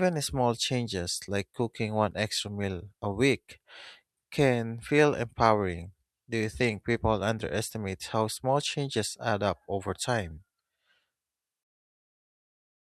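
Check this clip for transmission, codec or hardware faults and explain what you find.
Nothing in this speech recording points to a transmission, codec or hardware problem, so there's nothing to flag here.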